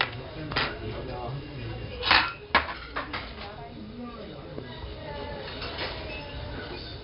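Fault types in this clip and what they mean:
4-bit ADPCM compression: Each sample is coded as a coarse 4-bit step from a predicted value, leaving heavy gritty hiss that rides on every loud passage and smears sharp attacks. The spectrogram shows level-following noise and nothing above 5.3 kHz, which fits roughly 44 kbps.
Loud pop: Two sharp pops land on top of the sound at 0.52 s and 4.58 s, each about 20 ms long, the first roughly 20 dB and the second roughly 10 dB above the signal. Likely caused by a voltage step or glitch, they appear as thin vertical spikes on the waveform and broadband stripes on the spectrogram.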